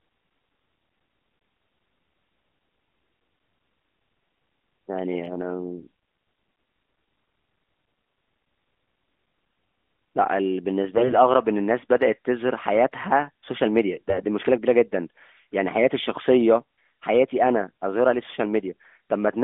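On a weak link, flipped bits in the lightly protected parts of the AMR frames got past the checksum twice, from 10.94 to 11.16 s and from 14.10 to 14.26 s, where a few percent of bits arrive wrong. These AMR bit errors misplace the codec's excitation pulses and skew its finer pitch, gain and spectral values, so the narrowband speech keeps its rough pitch and level but briefly turns hoarse, scratchy and gargly.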